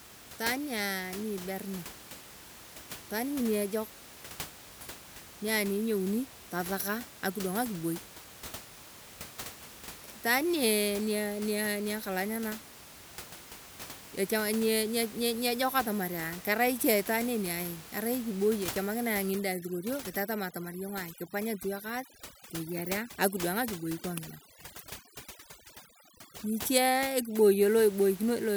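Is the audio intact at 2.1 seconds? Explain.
Yes, the audio is intact at 2.1 seconds, with only the room's own background noise sitting about 16 dB below the speech.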